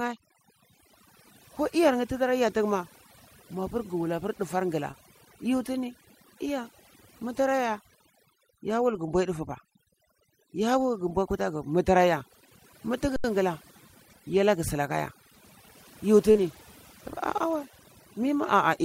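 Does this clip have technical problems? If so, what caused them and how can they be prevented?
Yes. Several faults stack up here.

Overdone noise removal runs throughout. A noise reducer set far too aggressively cuts individual frequency bands down or out whenever they sit near its noise estimate, and it takes the quieter parts of the speech with them. The background drops and breaks up into twinkling specks. Setting the suppressor to a gentler reduction depth, or removing noise at the source, prevents this.

Lost packets rebuilt from error correction appear at 2.47–2.49 s, 8.89–9.07 s, 11.09–11.11 s, 14.89–14.91 s, 16.35–16.61 s and 17.51–17.61 s. Packets went missing, and the decoder played the low-bitrate copies carried in the following packets, so nothing goes silent. The longer stretches, 100 ms at 8.89 s and 140 ms at 16.35 s, point to runs of several lost packets. Those moments sound rougher and noisier. 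A steadier network path with less packet loss prevents it.

Short concealed packet loss occurs at 4.91–4.95 s and 16.31–16.37 s. The decoder received nothing in time for about 20 ms and then about 40 ms, so it extended the preceding sound and blended back in. The result is a brief smear or wobble, and the second one runs straight into the rebuilt stretch that follows. A larger jitter buffer and a cleaner connection would prevent this.

An underrun with a held sample hits at 13.16–13.24 s. The playback buffer emptied, and the converter froze on its last value for 80 ms. The waveform flattens and the sound simply stops. Because playback then resumed where it had left off, the return is soft rather than a sharp click. A larger output buffer, or less CPU contention on the playback device, prevents this.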